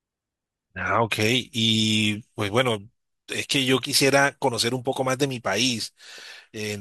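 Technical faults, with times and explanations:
No technical faults can be heard in this speech recording; the signal holds steady, with no interruptions, distortion or level disturbances at any point.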